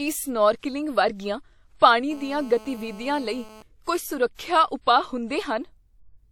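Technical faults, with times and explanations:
1.16 to 1.20 s, 1.77 to 1.82 s and 4.35 to 4.39 s, pre-echo: the transform codec spreads quantisation noise across each whole block, so where a sharp attack sits in a block, noise meant to be masked by the loud onset also lands in the quiet stretch just before it. Each attack is preceded by a brief hiss, spread over 33 ms, 48 ms and 43 ms respectively, and the onsets sound soft or smeared.
2.11 to 3.62 s, GSM phone buzz: a nearby 2G phone on a call transmits in bursts about 217 times a second, and the audio circuitry rectifies those radio pulses into the signal path. The result is a hard, raspy buzz at 217 Hz with many harmonics, sitting about 22 dB below the speech and holding nearly steady for this 1.5 s stretch, unrelated to anything in the speech itself.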